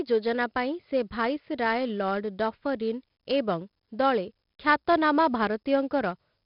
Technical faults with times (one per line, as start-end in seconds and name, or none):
0.00-6.45 4-bit ADPCM compression